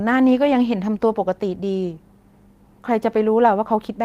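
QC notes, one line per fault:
No faults heard anywhere in this speech recording.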